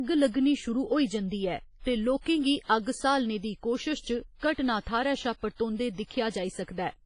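A transform codec working at a starved bitrate is the likely cause, most plausibly WMA compression at around 24 kbps. Heavy quantisation leaves the speech ringing and washy, with hiss that swells and fades alongside it, and nothing survives above 10.3 kHz.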